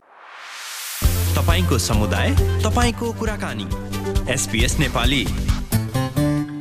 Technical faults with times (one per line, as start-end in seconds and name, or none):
2.90-3.91 one channel drops out
5.77-5.88 one channel drops out